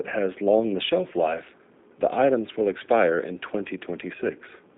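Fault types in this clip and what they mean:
G.729 codec: speech is rebuilt from a vocal tract filter and sparse pulses, leaving only 200 Hz to 3.7 kHz and a plainly rough, synthetic sound throughout.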